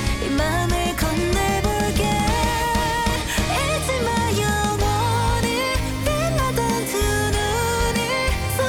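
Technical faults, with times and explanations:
No technical faults can be heard in this audio.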